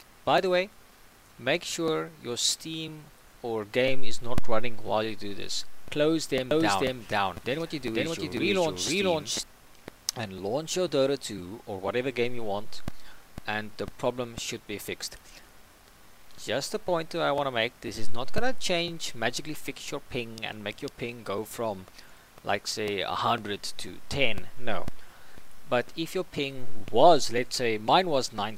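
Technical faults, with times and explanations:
6.51–9.43 s, doubled audio track: a second, full-band copy of the sound runs about half a second behind the first and at roughly the same level. It is most likely a slower capture path or an edit leaving two copies out of step. Unlike an echo or reverb, the late copy has no decay, no repeats and no room colour. It starts and stops abruptly at the edges of this span rather than fading.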